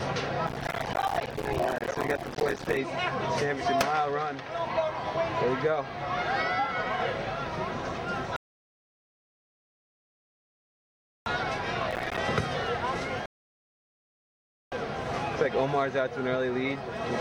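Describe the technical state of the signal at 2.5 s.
At 2.5 s the audio sits inside a processor overload crackle from 0.47 to 2.77 s: missed buffers of about 5 ms leave silent gaps, heard as gritty tearing.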